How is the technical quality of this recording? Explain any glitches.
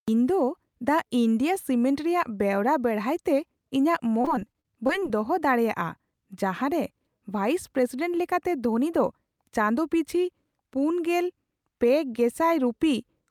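The speech has one glitch: repeated packet loss from 4.21 to 5.03 s. Short packets kept going missing, each gap up to 30 ms patched by stretching the preceding sound, leaving choppy speech with pieces missing.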